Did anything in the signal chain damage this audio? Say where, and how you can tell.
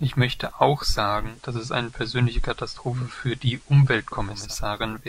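Yes. The damage happens at reception, before playback: the digital radio is blending to analogue. Just after "möchte auch", at 1.14 s, the sound cross-fades over about 266 ms to the station's FM broadcast and returns at 4.56 s. During that stretch, hiss rises to around 35 dB below the signal, and the level shifts by about 1 dB. This happens because the receiver lost the digital stream and substituted the band-limited, noisier FM copy.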